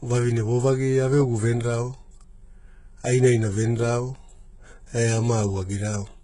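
A speech recording with HE-AAC compression throughout, likely at a very low bitrate around 12 kbps. Above a crossover the treble is rebuilt rather than coded, so s sounds come out gritty and lispy instead of merely dull, as a plain low-pass would leave them, and everything stops at 11.1 kHz.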